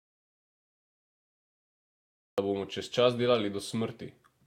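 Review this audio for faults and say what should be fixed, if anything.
Audio dropout to silence from the start to 2.38 s: plain silence with no room tone, likely a lost input, until speech resumes at "da bomo čez čas". Check connections and mute states before recording begins.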